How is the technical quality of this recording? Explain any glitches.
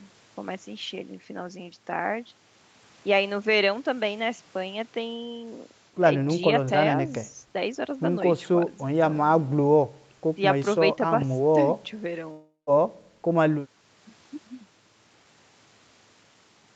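The recording has one glitch, heard through a call link whose sound stops at 8 kHz. A long network dropout runs from 12.31 to 12.70 s. Audio likely stopped arriving for about 360 ms, so the receiver stretched the last sound into a fading buzz, then left about 130 ms of silence before the speech resumes with that stretch missing.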